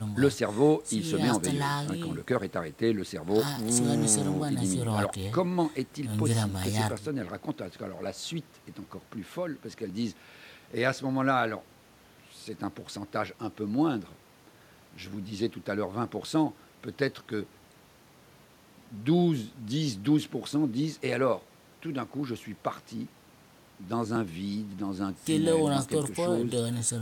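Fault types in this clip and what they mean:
Dropped buffer (overrun): At 9.9 s and 24.16 s the speech skips ahead by about 20 ms. The likely cause is samples overwritten before being read.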